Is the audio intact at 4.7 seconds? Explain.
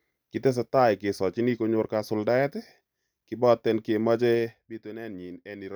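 No. At 4.7 seconds the speech is in a burst of zipper noise running from 4.32 to 4.76 s. A drop of roughly 15 dB is applied in unsmoothed 2 dB steps, around twenty per second, and each step clicks, giving an audible ticking over the fade.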